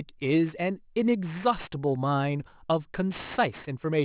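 Throughout the speech, sibilants sound gritty and metallic: aliasing. Content above 4 kHz folded back down when the rate dropped from 24 kHz to 8 kHz unfiltered.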